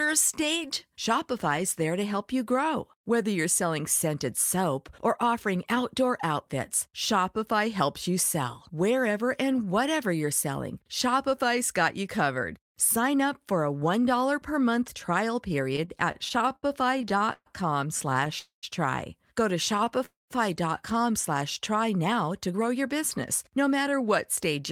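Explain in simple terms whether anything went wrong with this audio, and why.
Right after "per month trial", from 15.73 to 17.48 s, the audio hits repeated stalls (stutter): 18 little hiccups where packets showed up late and the receiver stretched the last bit of sound to cover them. The longest is 131 ms. Shorter bursts follow at 18.10 to 18.31 s and 19.78 to 20.02 s.

There are also two call audio freezes, at 18.39 to 18.65 s and 20.06 to 20.32 s. Each is about a quarter-second hold where the sound buzzes on and then drops to silence before picking up again. The likely cause is packets getting stuck in transit, so a gap was added but nothing was lost.

From 21.88 to 24.08 s you get a jitter buffer speed-up. After all that waiting, the receiver had a backlog and trimmed tiny slivers, roughly 150 ms in total, to catch up. The speech runs about 7% fast at the same pitch, so it sounds a bit rushed.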